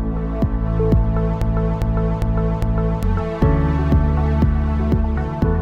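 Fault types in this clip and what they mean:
Broken-record loop: playback or streaming likely stalled and kept resending the last fragment it held, so from 1.42 to 3.03 s one 0.40 s piece of sound repeats exactly, back to back, four times, while the audio meant for that stretch is lost.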